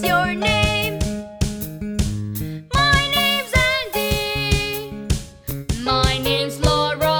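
At 5.51 s there's a tiny block of digital silence, about 1.3 ms long, which fits a 64-sample buffer going unfilled in time. The sound drops to nothing and snaps straight back without any fade, so what you hear is just a sharp little tick.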